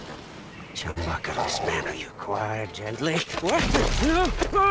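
Clock drift between sender and receiver runs through the whole clip. The sender's clock is slower by roughly 4 percent, so the receiver's buffer keeps draining.

From 0.10 to 4.65 s, repeated timing corrections stretch the sound to 98 percent speed. They add roughly 70 ms in total, in small, unevenly spaced edits.

At 0.91 to 0.98 s, a short stall from a late packet holds the sound for 51 ms. A second stall follows at 3.22 to 3.28 s and holds it for 41 ms. Nothing is lost, but each spot drags with a slight buzz or dip. The call path cuts everything above 8 kHz, which fits G.722 at 64 kbps.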